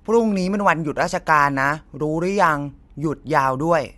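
No technical faults can be heard anywhere in the speech.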